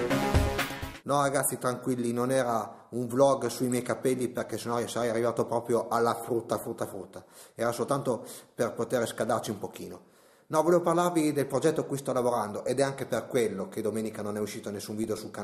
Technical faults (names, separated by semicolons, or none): DAB burbling